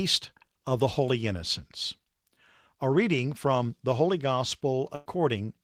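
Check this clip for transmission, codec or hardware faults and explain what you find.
Two transmission faults appear in this speech clip. From 0.53 to 0.57 s there is a short concealed packet loss. About 20 ms never arrived, and the receiver extrapolated the preceding sound to fill it. It is heard as a brief smear, and a spectrogram shows a slightly blurred vertical slice.

From 4.95 to 5.07 s comes a burst of packet loss. About 100 ms is missing, and the receiver bridges it with a fading continuation of the last sound, heard as a held buzz or hiss. The waveform shows a decaying, repetitive stretch rather than silence, and the spectrogram shows flat, smeared harmonics.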